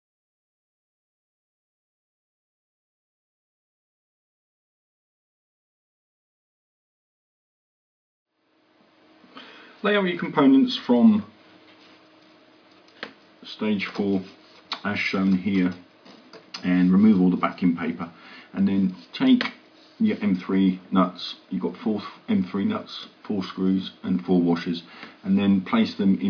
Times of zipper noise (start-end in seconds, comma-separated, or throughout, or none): none